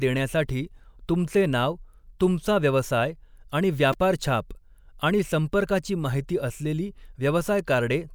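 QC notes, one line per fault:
3.93 s, repeated buffer: just after "नाव तुमचा व्यवसाय आणि", new audio failed to reach the device in time, so it replayed its last block four extra times. Each block is about 2.9 ms long, which fits a 128-sample buffer. Because the piece is so short, the hard joins between copies fuse into a brief buzzy click rather than an audible stutter. Around 10 ms of the real speech is skipped in its place.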